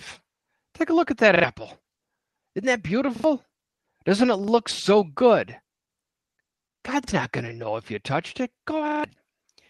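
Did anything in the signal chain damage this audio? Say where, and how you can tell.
Yes, a repeated buffer at the playback driver: stutters at 1.36 s after "a look at that", 3.16 s, 4.44 s, 7.04 s and 8.88 s. Each replays roughly 40 ms because new audio arrived late.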